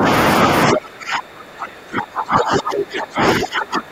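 Speech suppressed in double talk at 0.0–0.07 s and from 0.66 s onward, likely echo-canceller ducking: dips of about 10 and 25 dB leave shrunken, gapped waveform.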